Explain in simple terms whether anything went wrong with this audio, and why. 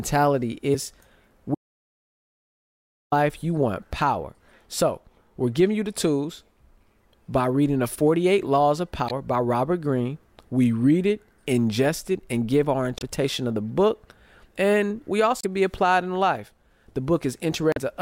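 Damaged data in a compressed stream shows up at 0.71–0.75, 9.06–9.11, 12.98–13.02, 15.41–15.44 and 17.71–17.78 s. A few bytes of the compressed file were corrupted, so the decoder misread those frames and skipped ahead to find its place again, leaving a brief chirp or blip in the speech.

An audio dropout to silence runs from 1.55 to 3.12 s. The speech cuts out into total silence, with no background sound, for about 1.57 s. The likely cause is that the input signal was lost while the recorder kept writing nothing.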